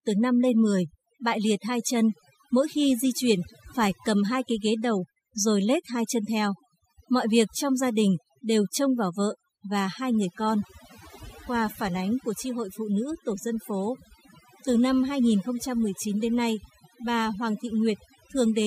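Overdone noise removal runs through the whole recording: a noise reduction stage was pushed far too hard, so any frequency band sitting close to its estimate of the background gets pulled down sharply or cut out entirely. The quieter parts of the voice fall inside that range and are stripped away too. Between phrases the background collapses into near silence dotted with twinkling specks.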